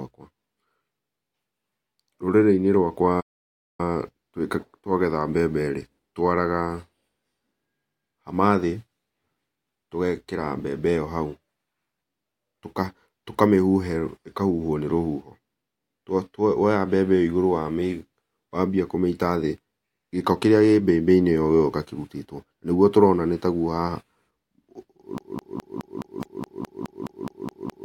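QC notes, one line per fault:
3.20–3.80 s, playback stall: the speech halts for 0.58 s, leaving a flat waveform gap and a blank spectrogram band, likely because the player ran out of data.
25.18 s to end, broken-record loop: one 210 ms fragment repeats 13 times back to back as identical tiled spectrogram blocks, likely from a stalled stream resending its last audio.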